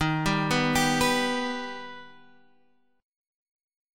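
A short piece of audio that switches, from 1.33 s to the end, to a lower-bitrate stream: it cuts over abruptly without a gap, everything above 11.1 kHz disappears and codec artefacts rise, which fits a step from roughly 96 to 32 kbit/s.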